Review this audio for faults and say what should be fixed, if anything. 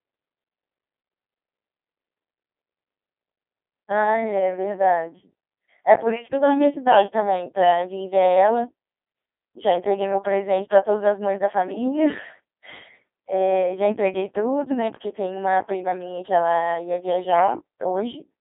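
Codec 2 vocoder damage runs throughout. The speech is rebuilt from sine waves, so it sounds robotic and buzzy, with a band of about 250 Hz to 3.6 kHz and nothing above 3.8 kHz. That fits a 2.4 kbit/s mode. Simple band-limiting would dull the sound without this synthetic buzz, because there the original waveform survives. To prevent it, carry the speech over a waveform codec at an adequate bitrate instead of a parametric vocoder.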